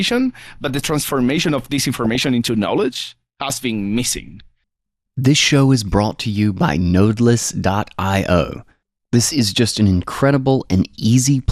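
Throughout the speech, the sound is dull and granular, with a gurgling distortion. This is likely MP2 compression at a rate near 80 kbps, where starved upper sub-bands switch off and the remaining bands are coarsely quantised.

From 2.04 to 2.28 s and again from 8.91 to 9.05 s, DAB burbling appears as short bursts of blips. Low-rate bit errors, well under one percent, slip past error correction into the audio data, putting short blips of noise in single sub-bands.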